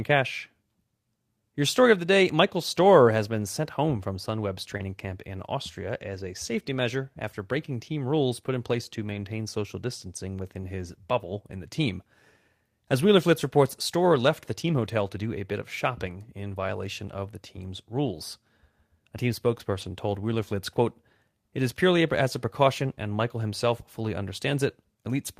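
At 4.77 to 4.81 s a short concealed packet loss occurs. About 20 ms of the stream arrived too late for the decoder, which continued the preceding sound to fill the hole and then crossfaded back, leaving a brief smear or wobble.

From 4.79 s, and again at 9.05 to 9.23 s, 11.63 s, 18.05 s and 19.81 s, the audio is a lost packet rebuilt from error correction. The decoder substituted low-bitrate backup copies carried in later packets, so nothing drops out, but these 20 ms patches, and the 100 ms stretch at 9.05 s (which fits about five consecutive frames), sound rougher and noisier.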